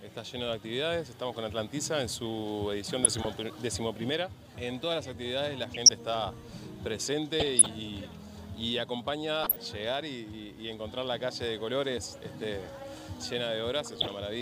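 DAB burbling breaks in six times: 3.04 to 3.27 s, 5.74 to 5.91 s, 7.40 to 7.68 s, 9.39 to 9.56 s, a brief hit at 11.71 s, and 13.85 to 14.14 s. Weak reception lets bit errors, a fraction of a percent, slip past error correction. Corrupted samples put short blips of noise in single sub-bands, and corrupted scale factors make sub-bands leap in level for up to a frame.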